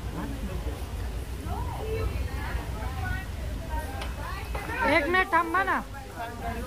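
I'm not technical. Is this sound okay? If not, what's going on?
No. From start to finish there's a faint grainy grit, and even the quiet moments are filled with a low noise. That points to a likely stuck bit, one digital bit frozen in place. Unlike steady background hiss, the grit follows the sound itself.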